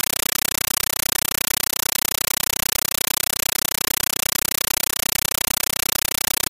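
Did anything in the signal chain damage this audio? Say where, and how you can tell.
Yes. The damage is at playback, on the digital link. From start to finish the clip is very loud, chattering static instead of the intended sound, pulsing at 31.25 Hz: bursts of about 9.3 ms of noise, each followed by silence until the next 32 ms frame. That is a compressed stream played as audio. An AC-3 (Dolby Digital) bitstream, which fits a 448 kbps encode, was passed as plain PCM samples over S/PDIF or HDMI instead of being decoded, so each coded frame plays as noise followed by its zero padding.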